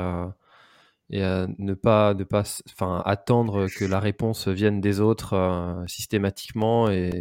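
From 5.87 s to 7.12 s, just after "vienne des autres euh", the speech carries regular small ticks every 0.25 s, about seven in all. These are periodic USB or driver dropouts: the audio path stalls at fixed intervals, each time replacing a couple of milliseconds with silence.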